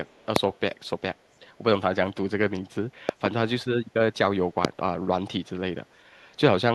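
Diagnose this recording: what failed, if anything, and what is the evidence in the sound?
Echo leak, 0.05 to 0.26 s and again at 0.54 to 0.60 s: a very faint copy of the speech returns 455 ms behind the original, in short scraps. This is call processing: the far end is likely playing the call over a loudspeaker, and its echo canceller did not fully subtract what its microphone picked up, so the residue was sent back down the line with the round-trip delay.

Loud pop at 0.36 to 0.38 s, a double pop across 3.09 to 3.28 s, and another at 4.65 to 4.67 s: sharp transients that rise well above the speech level while the speech carries on underneath. These point to the analogue wiring or driver stage. A sudden voltage step or pulse, likely from a loose plug, a switch or a driver glitch, was added to the signal, and the following circuitry shaped it into a brief thump.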